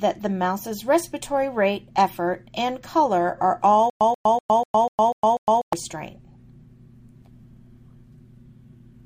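A playback stall, likely in the player or stream, produces a stutter with silent gaps from 3.90 to 5.73 s: a 135 ms fragment repeats seven times, each followed by about 110 ms of digital silence on a steady 245 ms cycle, so the audio belonging to that stretch is lost.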